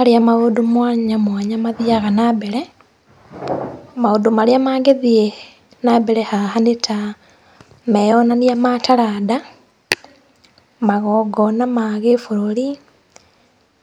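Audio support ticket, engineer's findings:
Brief crackle on a speech peak, 4.89–4.91 s, single event. Hard clipping: peak exceeded the headroom of a gain stage or converter by about 1 dB and was cut flat. Flattened tops add high-order harmonics, heard as a short crackle rather than sustained fuzz. Likely component: input gain or ADC level, so reduce gain upstream.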